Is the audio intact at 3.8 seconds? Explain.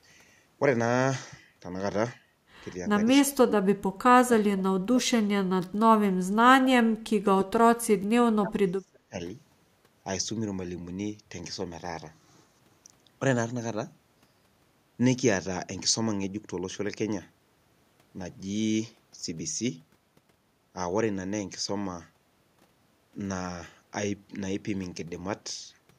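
No. Speech suppressed in double talk affects 3.7 to 5.17 s: the echo canceller likely mistook overlapping talk for echo, pulling the speech down by roughly 30 dB.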